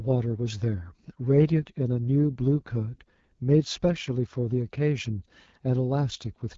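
Throughout, AMR wideband (HD Voice) coding leaves the speech rough and raspy, fitting an 8.85 kbit/s mode. The spectrogram stops near 7.5 kHz, with smeared, noise-like energy above 6.4 kHz.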